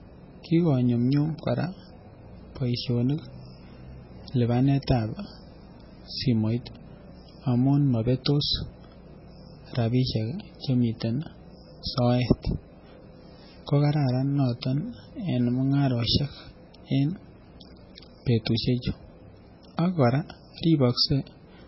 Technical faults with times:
0.00-21.67 MP3 compression

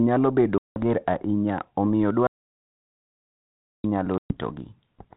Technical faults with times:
0.58-0.83 packet loss on an ADPCM call
2.27-3.84 audio dropout to silence
4.18-4.37 packet loss on an ADPCM call

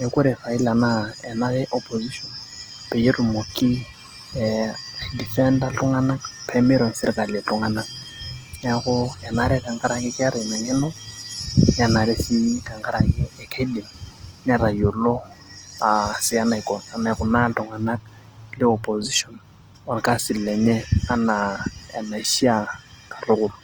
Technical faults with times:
0.00-23.63 Opus compression

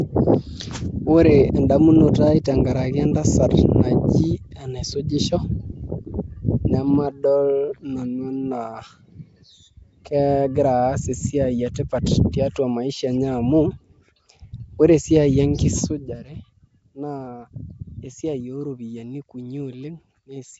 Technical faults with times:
0.00-20.59 Nellymoser compression
2.44 pre-echo
15.79-16.19 zipper noise

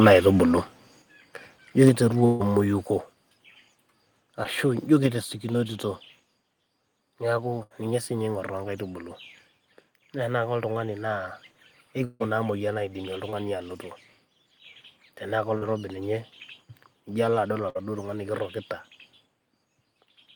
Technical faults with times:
1.02 microphone volume stepped down
1.85-1.89 microphone overload
1.89 microphone volume stepped down
2.25-2.42 burst of packet loss
2.88 microphone volume stepped down
4.43-4.47 short concealed packet loss
5.06 microphone volume stepped down
7.63-7.72 burst of packet loss
12.04-12.22 long network dropout
13.30-13.34 short concealed packet loss
15.58-15.64 short concealed packet loss
17.70-17.77 burst of packet loss

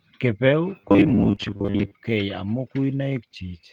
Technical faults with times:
0.81-1.95 robotic sound from repeated short buffers
1.27-1.45 lost packet rebuilt from error correction
1.35-1.39 short concealed packet loss

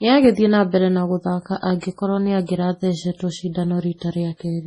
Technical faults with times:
0.00-4.66 MP3 compression
1.80-1.82 pre-echo
2.46-2.49 pre-echo

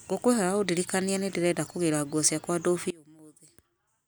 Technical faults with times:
2.90-4.07 one channel inverted

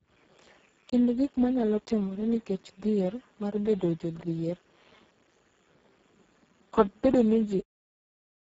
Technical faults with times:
0.00-8.60 Speex codec

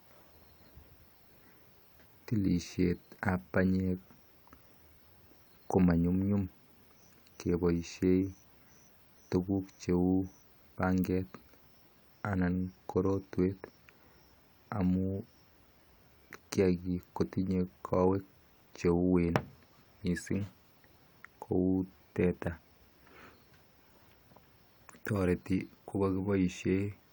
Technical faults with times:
none

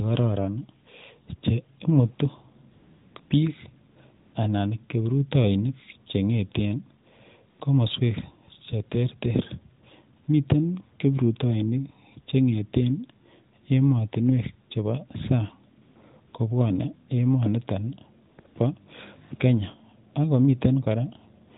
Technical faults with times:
2.72-3.30 AMR comfort noise
3.92-4.34 AMR comfort noise
7.04-7.06 AMR comfort noise
7.50-7.60 AMR comfort noise
10.24-10.28 AMR comfort noise
15.82-15.96 AMR comfort noise
16.28-16.34 AMR comfort noise
18.30-18.56 AMR comfort noise
21.48 AMR comfort noise

